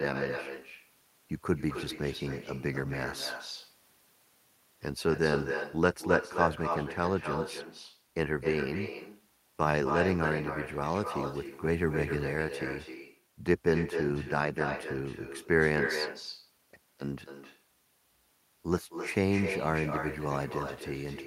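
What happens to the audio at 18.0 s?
At 18.0 s the speech is shadowed by a quieter, thinner copy arriving about a third of a second later, around 7 dB down. This is echo with no canceller, present throughout: the far end's loudspeaker feeds its microphone and nothing removes the returned signal.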